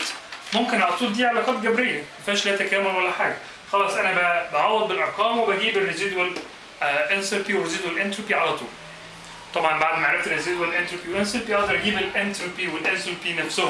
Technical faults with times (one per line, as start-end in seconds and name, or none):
0.00-13.70 resampler restarted on every block